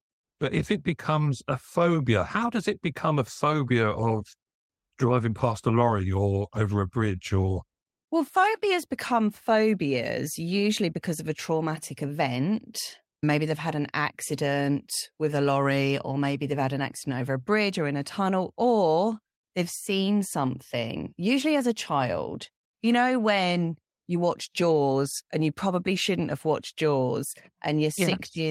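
No technical faults are audible anywhere in the speech recording.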